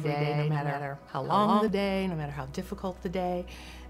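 Right from the top and running until about 1.68 s, there's a doubled audio track: a second, full-band copy of the sound trailing roughly 150 ms behind, at about the same level as the original. It's dry, with no tail or room colour, so it reads as a hard slapback rather than an echo, and it cuts out abruptly at 1.68 s. The likely cause is the signal getting picked up a second time through a slower path.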